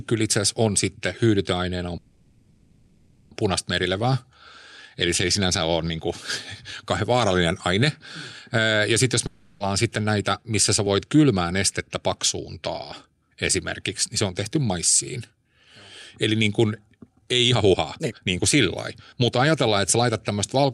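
From 1.97 to 3.33 s there is a call audio freeze: the last sound is stretched into a fading buzz for about 1.34 s. Packets were likely held up long enough to empty the jitter buffer, and the speech then resumes where it stopped, with nothing lost but everything now later.

At 9.26 s, right after "sitten jos", a long network dropout replaces 0.34 s with a decaying hiss. The original audio for that stretch likely never arrived, so speech picks up further on with that portion missing.

Two jitter buffer speed-ups follow. From 9.92 to 13.29 s, ending just before "esimerkiksi niin se on", speech runs about 10% fast at unchanged pitch, with roughly 0.4 s trimmed out in tiny pitch-period cuts. From 17.09 to 20.03 s, after "niin kun", the rate rises to 134% and around a second is removed, which sounds clearly hurried.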